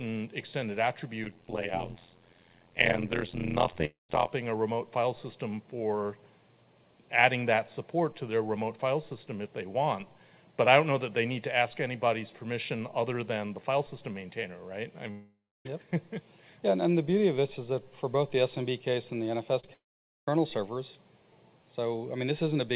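From 1.24 to 4.30 s the sound carries an overlap-add ripple. The audio was split into windowed frames and rejoined with overlaps whose gains do not add up to a constant, so the level swings about 60 dB once per frame, at around 100 Hz. It sounds like a harsh, metallic buzz with extra tones around each note. A waveform shows the envelope chopped into a dense comb of peaks and near-nulls, and a spectrogram shows regular vertical striping with sidebands either side of each component.

Inside that stretch, at 3.85 to 4.10 s, comes the first gap, likely a long network dropout. About 240 ms of audio never arrived. The receiver stretched the last sound into a fading buzz or hiss, leaving roughly 160 ms of near-silence before the audio resumed further on. The same pattern, likely another dropout, recurs at 15.11 to 15.66 s, with about 540 ms lost and about 300 ms of it silent. On a spectrogram each gap appears as a smeared, decaying continuation of the preceding spectrum, then a blank column. 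Around 19.73 to 20.28 s a third, likely dropout removes about 540 ms, and nearly all of it, about 490 ms, is silence.

Just before that, at 19.60 to 19.64 s and at 19.66 to 19.68 s, there are short concealed packet losses of about 30 ms and 10 ms. In each, the decoder bridged the hole by extending the prior pitch or noise and crossfading back. The result is a brief smear or wobble, visible as a small flattened patch where detail repeats instead of changing. Throughout, nothing reaches above 4 kHz, which fits the G.711 call path's narrowband coding.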